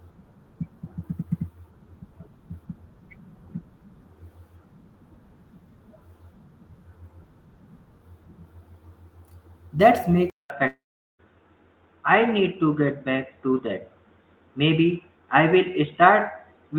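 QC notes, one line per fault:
10.30 s to end: input switched to a poorer device. From this point the band stops sharply at 3.7 kHz, so the sound turns dull and boxy. A 200 ms silence opens the change, and a new, faint noise floor sits roughly 45 dB below the signal, with loudness about the same. On a spectrogram, everything above 3.7 kHz goes dark after a visible gap. This is likely a change of input device mid-recording.
10.67 to 11.22 s: long network dropout. About 520 ms of audio never arrived. The receiver fills the hole by extending the last sound as a brief fading buzz, then leaves roughly 0.41 s of silence before the sound resumes further on, with that stretch gone. On the waveform a short decaying tail collapses to a flat line. On a spectrogram, smeared bands fade into a blank column. The likely cause is lost packets.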